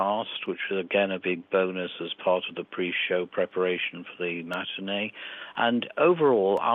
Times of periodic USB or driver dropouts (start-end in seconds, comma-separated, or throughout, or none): 0.46-6.58